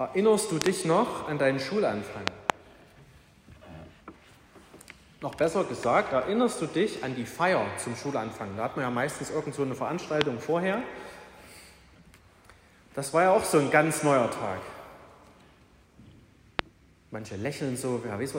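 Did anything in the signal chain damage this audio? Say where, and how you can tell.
Yes, a likely voltage spike in the analogue wiring produced loud pops, about 25 dB above the sound: double pops at 0.62–0.68 and 2.28–2.52 s, and single pops at 10.21–10.23 and 16.59–16.61 s.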